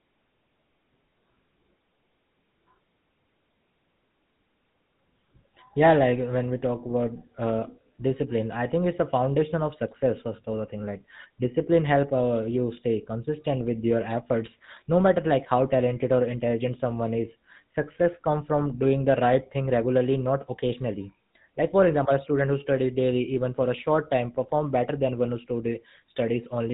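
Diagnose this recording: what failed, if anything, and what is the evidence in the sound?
The speech passed through the GSM full-rate codec at the codec stage, with a rough, gravelly texture that fits its 13 kbps mode. The codec rebuilds the vocal tract from sparse regular pulses, leaving plainly audible buzzy damage throughout, and the band stops at 3.8 kHz.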